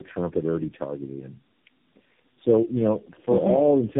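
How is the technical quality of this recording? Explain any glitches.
The quality is poor throughout, with one fault running the whole length of the speech. Tandem speech coding: the call seems to have been decoded and re-encoded through several codecs in a row, likely four, each compressing the previous one's damage. The result sounds rough, muffled and warbly, with nothing above about 3.7 kHz.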